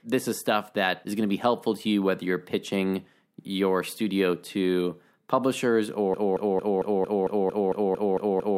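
At 6.14 s the player or stream likely stalled and kept resending the last fragment it held. This broken-record loop replays a 0.23 s slice of speech exactly, back to back, eleven times until the end, and the speech that should follow is lost.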